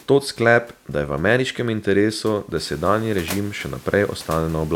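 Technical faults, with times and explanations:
There are no technical faults in this speech clip, so there are no times or explanations to give.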